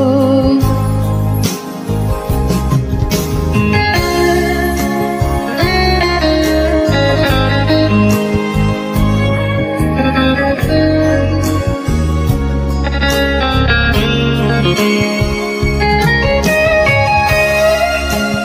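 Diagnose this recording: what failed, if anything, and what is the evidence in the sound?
Nothing in this recording points to a failure at any stage of the chain. There is no event in the sound to tie to a stage, so there is no mechanism to describe.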